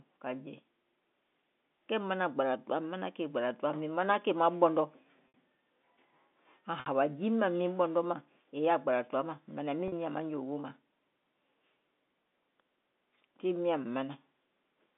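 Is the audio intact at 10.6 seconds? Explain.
Yes, the audio is intact at 10.6 seconds, with the speech carried through G.711 telephone coding in its narrow line band and no fault at that point.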